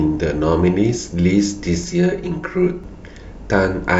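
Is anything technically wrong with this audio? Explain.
Yes. From 1.84 to 2.84 s the speech shows channel delay with comb filtering. One channel arrives around 5 ms behind the other, and when the two are summed to mono, the shared content cancels at evenly spaced frequencies: a first notch near 100 Hz, then further notches roughly every 200 Hz above it. For that second, the sound turns hollow and phasey, with a fixed coloration, before returning to its earlier character.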